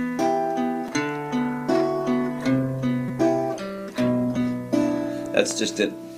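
At 0.88 s, new audio failed to reach the output in time, so the device replayed its last buffer in a repeated buffer fault. Each piece lasts about 5.33 ms, which fits a 256-sample buffer. It plays two extra times, so instead of a stutter you hear a brief buzzy click with a hard join at each repeat.

From 1.28 s to 5.30 s the connection slowed and an adaptive stream switched to a lower bitrate. Codec artefacts rise, which fits a step down from about 64 to 24 kbit/s Opus. The quality changes abruptly at both ends and the sound never breaks.

Inside that stretch the repeated buffer fault returns twice. At 3.08 s the same 5.33 ms piece plays three extra times, giving a slightly longer buzz. At 4.36 s it plays once more, leaving a single short click.

From 5.51 s to 5.53 s a loud pop sits on top of the sound, which continues underneath. It is a single sharp hit peaking about 10 dB above the signal, likely caused by a sudden voltage step such as static or a switching transient.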